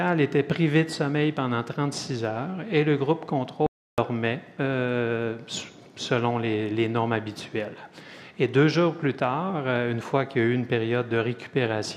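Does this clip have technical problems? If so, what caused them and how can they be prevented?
Yes. There is an audio dropout to silence from 3.66 s to 3.98 s: the sound cuts off mid-flow, leaves about 0.32 s of dead silence with no room tone underneath, then resumes abruptly. The missing stretch is simply gone. The likely cause is a brief loss of the input signal, such as a momentary disconnect, a failed link or an accidental mute, while recording carried on writing silence. Secure connectors and cabling, avoid unreliable wireless links, and monitor input levels during recording.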